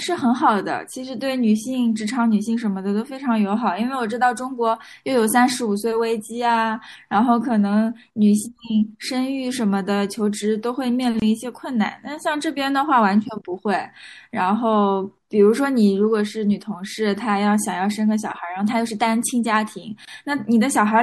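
Throughout the speech there is a watery, swirling quality, with dull treble and metallic chirps on s sounds. This is likely MP3 compression at a low bitrate, around 64 kbps. The damage is steady rather than bursty, unlike packet loss, because the encoder drops weak detail continuously.

At 11.20 to 11.22 s and again at 20.05 to 20.08 s, a gap at a join of encoded pieces cuts in. Each is a silence of about 24 ms with smeared edges. Unlike a dropout, the sound resumes exactly where it stopped, because padding from separately encoded pieces was left in.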